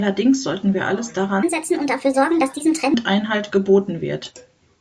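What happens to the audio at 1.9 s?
From 1.43 to 2.94 s, just after "sollten wir alles", the speech runs at the wrong sample rate: about 1.38 times too fast and about 5.5 semitones high, which fits 16 kHz audio played at 22 kHz. Unlike a pitch shift, tempo and pitch rise together, giving a hurried, chipmunk-like quality.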